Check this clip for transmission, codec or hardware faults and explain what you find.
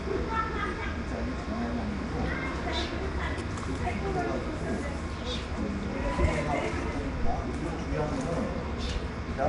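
One fault runs through the whole clip. Nellymoser compression, throughout: nothing reaches above 10.6 kHz, and the sound carries a rough, hissy halo with a smeared, underwater blur. The likely cause is Flash's Nellymoser Asao codec, which codes short blocks on a fixed, small bit budget and fills starved bands with noise.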